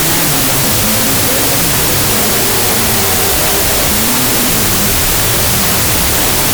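A recording of sounds plays throughout under a wall of loud, harsh noise, with the original only faintly audible and running at half speed and an octave low. That is a wrong sample width, and the pattern fits 32-bit float data read as 16-bit integers. Each true sample is split into two mismatched values, so most output is garbage and the timeline doubles. A plain sample-rate mismatch would shift speed and pitch cleanly, without the noise.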